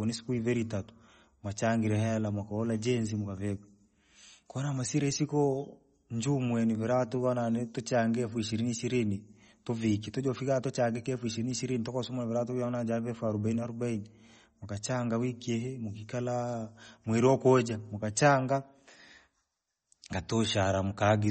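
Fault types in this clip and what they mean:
MP3 compression: the speech was likely passed through an MP3 encoder short of bits, which fits a rate near 32 kbps, so it cut the treble and dropped weak frequency lines. Nothing remains above 8.4 kHz, and plainly audible watery, swirling damage runs throughout.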